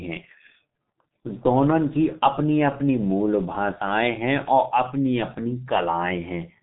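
Throughout, the speech carries heavy G.723.1 codec damage: nothing above 3.8 kHz, muffled and hoarse tone, smeared consonants, consistent with a coarse, roughly 6 kbit/s telephone coder.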